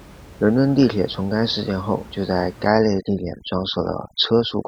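At 2.68 s, right after "件后就在", overdone noise removal sets in and lasts to the end of the clip at about 4.67 s. The noise reduction is working far too aggressively: any frequency band sitting near its noise estimate is pulled down hard or switched off, taking quieter speech components with it. The room noise, about 22 dB below the speech before this point, drops and breaks up into twinkling specks.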